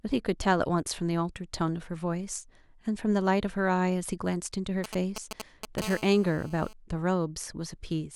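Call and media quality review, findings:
GSM signalling bursts, 4.84 to 5.80 s: galloping dit-dit-dit ticks and short raspy buzzes at 217 Hz, loud, nearly level with the speech. A nearby 2G phone signalling, as before a call or text arrives; its radio bursts are rectified in the audio circuit.

GSM phone buzz, 5.82 to 6.73 s: continuous hard, harmonic-rich buzz at 217 Hz, about 16 dB below the speech. A nearby 2G phone now in a call, transmitting steadily; the audio path demodulates the burst envelope into audible buzz.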